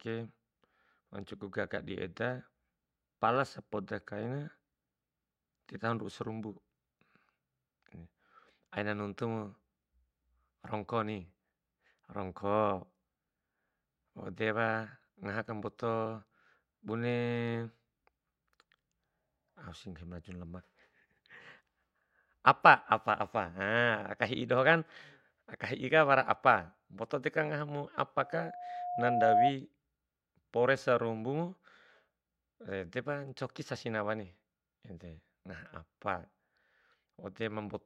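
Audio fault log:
28.20 to 29.55 s, loudspeaker feedback squeal. A steady tone at 715 Hz rises out of the speech and swells over about a second. It ends up roughly 10 dB louder than the speech. The microphone is picking up the loudspeaker it drives. At 715 Hz the gain around that loop exceeds one, so each pass is louder than the last. The tone feeds itself into a howl.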